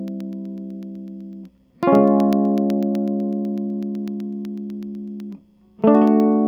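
From 0.08 to 6.33 s, periodic USB or driver dropouts stall playback every 0.125 s; each blanks a tiny sliver with silence, heard as ticks.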